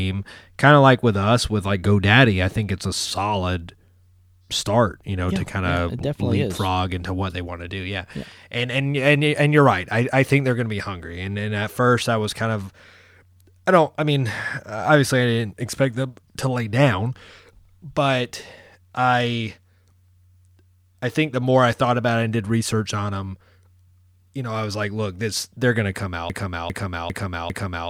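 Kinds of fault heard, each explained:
Broken-record loop: right at the end, from about 26.3 s, a 400 ms slice of the speech repeats exactly four times back to back and runs out the clip. That's likely a stalled player or stream resending its last fragment, so whatever should have followed is gone.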